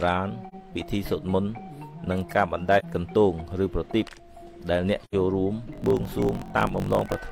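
AAC frame loss with muting appears at 0.48 s, 2.79 s and 5.04 s. Each time the decoder got no data for a stretch and zeroed its spectrum, so the sound drops out for about 43 ms in the first two gaps and about 85 ms in the third, where two frames went missing in a row. The overlapping windows taper the edges, giving soft fade-outs and fade-ins.

Block size mismatch (truncated) begins at 5.71 s and runs to the end. One stage produces longer blocks than the next one reads, which fits a 1024-sample read size, and the remainder of each block is discarded. The regular chopping adds a buzz at about 46.9 Hz, and because material is skipped the audio runs about 1.12 times faster while its timbre stays.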